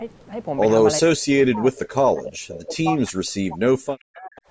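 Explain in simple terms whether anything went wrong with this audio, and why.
Speech suppressed in double talk, from about 1.0 to 4.5 s: the voice repeatedly dips and cuts out for about three seconds in total, at times almost to silence. This likely happened because both sides spoke at once, and the call's echo canceller couldn't tell this talker apart from the loudspeaker echo, so it turned both down.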